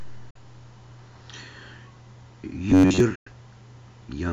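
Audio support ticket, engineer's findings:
Bluetooth dropout, 0.30 to 0.37 s and 3.15 to 3.29 s. Silences of about 46 ms and 107 ms, with audio resuming further on as if it had kept playing. Likely late or lost wireless packets at the headphone link.

Robotic sound from repeated short buffers, 2.70 to 3.00 s. Metallic buzz fixed near 94 Hz, still loosely tracking the speech. A segment of roughly 11 ms is replayed to fill most of the stretch while real audio is skipped, likely buffer starvation on playback.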